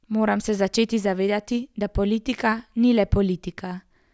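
No technical faults can be heard anywhere in this recording.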